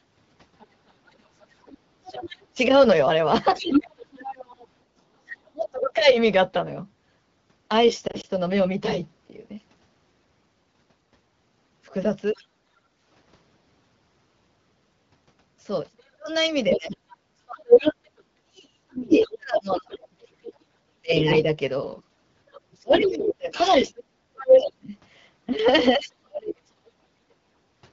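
Other side's voice leaking through, 0.59 to 5.0 s: a second voice sits roughly 15 dB under the speech, likely loudspeaker echo the echo canceller failed to remove. Speech suppressed in double talk, 2.54 to 6.08 s: while both voices overlap, the talker dips by as much as 25 dB for about a second in total, likely because the canceller turned down everything it could not separate.

Lost AMR speech frames, 8.07 to 8.26 s: three brief warbling dips totalling 60 ms are scattered over 160 ms, which fits single 20 ms frames failing their checksum and being concealed by the decoder with fading gain.

Other side's voice leaking through, 12.36 to 12.44 s: a faint scrap of the far voice appears, around 30 dB below the speech. Background gated by the echo canceller, 12.65 to 13.0 s: the room sound drops by up to 10 dB for roughly 400 ms while the canceller clamps the microphone, then returns.

Speech suppressed in double talk, 15.91 to 27.12 s: the talker repeatedly cuts out or thins, with drops of up to roughly 35 dB adding up to about 7 seconds. 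Other side's voice leaking through, 16.7 to 24.7 s: across the same stretch the far voice comes through at about the same level as the speech.

Background gated by the echo canceller, 27.58 to 27.74 s: the room sound briefly dips by up to 12 dB for about 150 ms. The AMR wideband (HD Voice) codec at 12.65 kbit/s shows only light coding damage.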